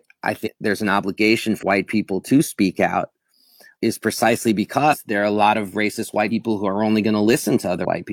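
Speech clip in which the decoder drops whole compressed frames, either missing from the file or rejected as damaged, so playback leaps forward by whole-frame amounts that point to frames of 46.4 ms. These compressed frames skipped show up as jumps at 0.42, 1.58, 4.88, 6.27 and 7.81 s. The first loses roughly 300 ms of speech, the second around 150 ms, and the last three about 100 ms each.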